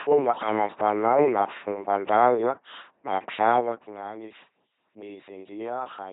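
From start to finish the speech buzzes like a mechanical robot, with hiss and buzz flipping where voicing is misjudged, and nothing above 3.9 kHz. The cause is heavy LPC-10 vocoder coding, which fits a 2.4 kbit/s rate. The gradual level rises and falls come through intact.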